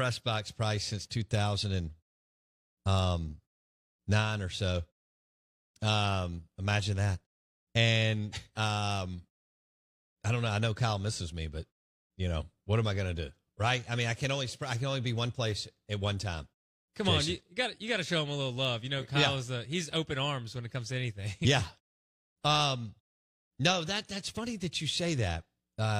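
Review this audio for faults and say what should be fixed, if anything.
No faults turn up in this speech audio, so nothing needs to be fixed.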